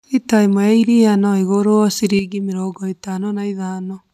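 At 2.19 s a sudden gain jump drops the speech and its background noise together by about 6 dB, staying lower through the end. Likely a gain setting applied without a ramp. The waveform shows an abrupt step to roughly half amplitude; the spectrogram darkens uniformly across all frequencies.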